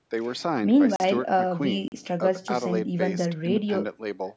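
At 0.96 s and again at 1.88 s the program likely failed to fill its output buffer in time, leaving a block of digital silence 40 ms long each time. The speech drops abruptly to silence and returns without a fade, heard as a short hole.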